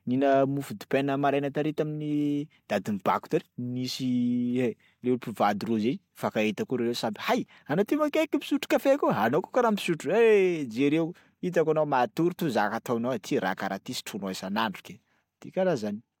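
Speech recording with no technical faults audible anywhere in the signal.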